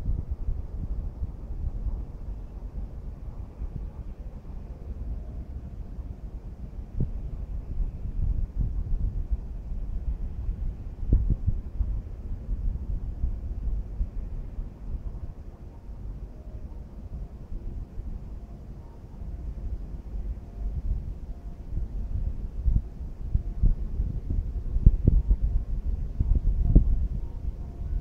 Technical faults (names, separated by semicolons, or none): dropped samples